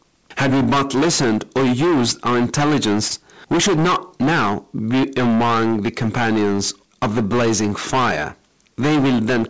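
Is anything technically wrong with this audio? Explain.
Yes, two problems. Hard clipping runs through the whole clip: it's driven about 20 dB past what a stage could pass, so nearly a third of the waveform gets flattened, giving a harsh fuzz on everything loud. Then around 3.08 to 3.12 s there's short concealed packet loss, where roughly 20 ms never arrived and the receiver patched it by extending the previous sound, leaving a quick smear or wobble. The G.722 call path itself is working normally, with nothing above 8 kHz.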